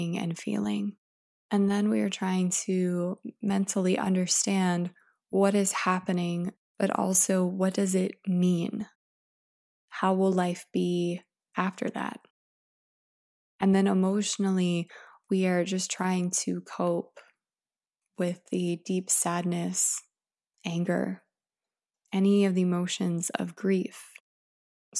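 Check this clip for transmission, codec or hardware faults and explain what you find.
I find no faults in this clip.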